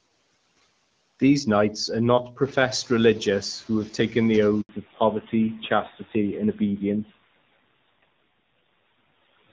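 From 2.4 to 2.99 s the noise suppressor is catching up: room noise jumps by about 13 dB, passes through under-reduced, then sinks by about 9 dB over 590 ms. Unlike a suppressor that is simply weak, it settles. At 4.61 s a handover gap makes the voice die away into silence for 80 ms while the call switches links. It is a full silence rather than a smeared or repeated packet-loss patch. From 4.69 s to the end comes a fallback to narrowband: everything above 4 kHz disappears and the sound turns duller and rougher. This fits a move from HD Voice to a low-rate narrowband codec, and unlike a passing filter, it never recovers.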